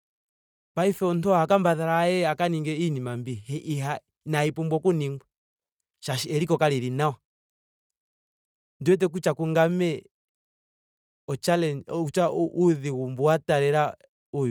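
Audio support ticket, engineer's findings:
Bluetooth LC3 compression, whole clip: grainy, breathy speech highs. Spectrogram shows patchy, noise-filled upper bands and nothing above 20.2 kHz. Likely LC3 transform codec, consistent with 48 kbps and 10 ms frames.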